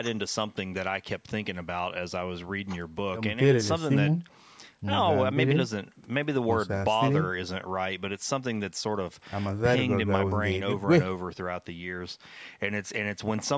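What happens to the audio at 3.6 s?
Nothing goes wrong at 3.6 s; the speech carries on intact there, with only the normal call microphone processing that trims the lowest bass and leaves nothing above 8 kHz.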